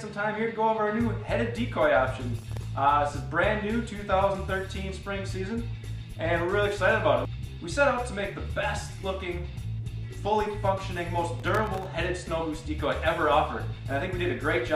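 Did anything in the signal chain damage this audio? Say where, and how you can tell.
Yes. Processor overload crackle at the driver/buffer stage, from 2.38 to 2.67 s and 11.40 to 11.86 s. Very short buffers, under a millisecond each, miss their deadlines repeatedly, each leaving a hard-edged silent gap. The waveform shows dozens of tiny dropouts; the spectrogram shows dense broadband vertical streaks.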